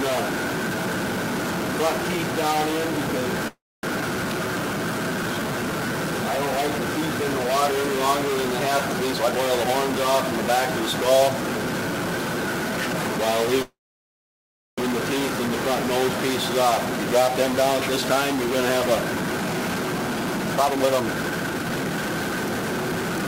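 A stuck bit runs through the whole clip, likely from a data line or converter bit held at one value. It adds grainy noise or buzzy distortion, pauses fill with noise, and the waveform shows jagged, stepped values.

From 0.15 s to the end, clock slip clicks tick roughly every 0.07 s. Each is a one-sample drop or repeat, likely from a clock mismatch of around 300 ppm. They show as faint, evenly spaced vertical lines on a spectrogram.

At 3.47–3.85 s a call audio freeze holds the sound for 357 ms, fading to about 250 ms of silence, likely because packets were delayed. The waveform shows a decaying tail, then a flat gap, with nothing lost.

At 4.01 s the audio skips ahead, dropping roughly 200 ms. It joins the two sides with only a 7 ms bridge, so the waveform shows an abrupt seam.

From 4.34 to 5.93 s a jitter buffer slow-down plays at 90% speed, adding 170 ms by repeating pitch periods. Sounds are drawn out at the same pitch, and spectrogram features look horizontally stretched.

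From 9.05 to 11.45 s a jitter buffer speed-up runs at 114%, removing roughly 400 ms. It sounds hurried at unchanged pitch, and spectrogram features look compressed.

At 13.62–14.80 s a second call audio freeze inserts 1155 ms: a fading tail, then about 1040 ms of silence, shown as a long flat stretch on the waveform. The likely cause is again delayed packets, and nothing is missing.

Two further jitter buffer speed-ups follow. The first, at 16.91–18.16 s, runs at 106% and removes about a tenth of a second. The second, at 18.87–23.18 s, runs at 125% and cuts about a second, sounding clearly rushed with tightly packed spectrogram features.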